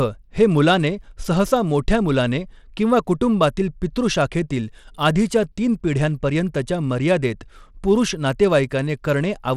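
Throughout the speech, a Bluetooth link has likely squeezed the audio through SBC compression with a small bit pool, a damage level that fits a low bitrate near 96 kbps. SBC's eight coarse sub-bands get too few bits, so the upper bands are starved and everything else is roughly quantised. Nothing survives above 17 kHz, the remaining treble flickers in and out, and a plainly audible gritty, aliased texture clings to every sound.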